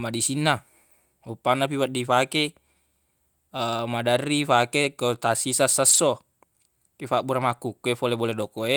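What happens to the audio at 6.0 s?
Between 5.89 and 5.99 s, just before 6.0 s, a lost packet was rebuilt from error correction: low-bitrate copies carried in the following packets filled the holes, so the speech turns briefly rougher and noisier. Unlike plain concealment, there is no gap and no buzzy repetition.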